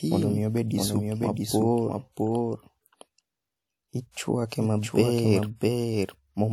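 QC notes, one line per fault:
throughout, doubled audio track: a full-band copy of the speech trails about 0.7 s behind, about 5 dB quieter, with no reverb-like decay or room colour; likely a second capture path or misaligned edit.
4.11–4.17 s, pre-echo: a 54 ms hiss comes before an attack and smears it, as codec noise spreads across its block; it leads the attack rather than trailing it.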